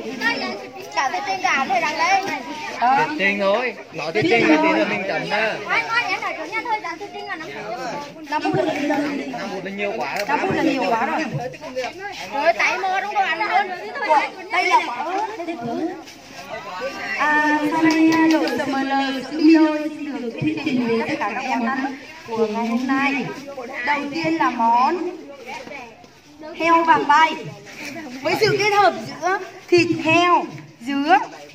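No audible technical faults occur anywhere in this recording.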